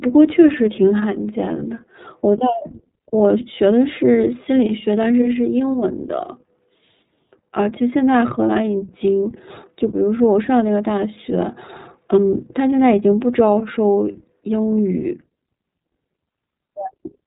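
Throughout, the speech carries plainly audible iLBC codec damage: nothing above 3.8 kHz, and a rough, synthetic texture from independently coded 30 ms frames, unlike the smeared muffling of simple low-pass filtering.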